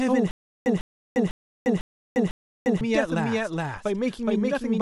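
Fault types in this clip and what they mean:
Doubled audio track: a second, equally loud copy of the speech trails about 400 ms behind throughout, likely from a slower duplicate capture path or misaligned edit.
Stutter with silent gaps: from 0.31 to 2.81 s, a 150 ms burst repeats five times, every 500 ms, with 350 ms of silence between, likely from a stalling stream.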